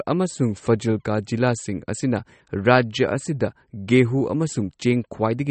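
Throughout the speech, the treble stops abruptly at 8.3 kHz and the plainly audible damage takes on a watery, swirling quality, with sibilants chirping metallically. This is likely MP3 compression at a low bitrate, which fits roughly 32 kbps, where the encoder trimmed high frequencies and zeroed weak spectral lines frame by frame.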